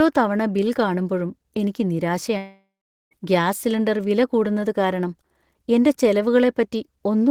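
A speech clip with a long network dropout, likely caused by the stream delivering no audio for about 0.74 s. After "തവണ ബിൽ കാണുമ്പഴും എനിക്ക്" at 2.37 s, the last sound is stretched into a fading buzz and then about 0.43 s of silence. The audio returns at 3.13 s with "ഗ്യാസ് സിലിണ്ടർ വില കൂടുന്നത്", and whatever fell in the gap is missing.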